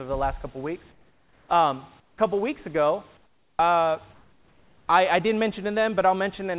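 During the pauses at 0.92–1.49 s after "the last couple weeks", 2.00–2.18 s, 3.17–3.59 s after "couple weeks ago", and 4.13–4.88 s between "couple weeks ago uh" and "I I didn't", the room background turns into a flat, featureless hiss, likely comfort noise in place of the background from discontinuous transmission. It drops about 7, 10, 0 and 6 dB. Unlike a gate or dropout, the gap never goes silent and stays band-limited to 4 kHz like the call audio.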